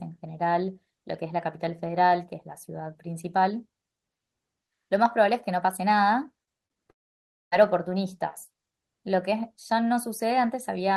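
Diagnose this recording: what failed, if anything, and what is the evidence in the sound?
From 6.43 to 6.78 s the speech turns choppy and robotic, with five short holes where the sound stutters and smears. The longest is about 37 ms, and roughly a third of that stretch is patched-over sound. This is repeated packet loss (robotic sound) at the network stage. Packets kept arriving late or not at all, and the receiver covered each gap by stretching the previous fragment, so about 120 ms of real audio never played.

At 6.90 s the audio collapses into a brief smeared continuation, then goes silent for nearly 0.6 s before returning at 7.54 s with about 0.62 s of content simply gone. The likely cause is a long network dropout. With nothing arriving, the receiver could only extend the last sound for an instant before running out of material, leaving silence until the stream resumed past the lost section.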